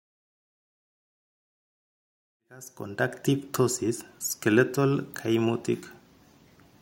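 No technical fault can be heard in this speech recording. The level rises in a smooth fade-in that begins at about two and a half seconds and reaches full level by 3.35 s, with no click or hard edge.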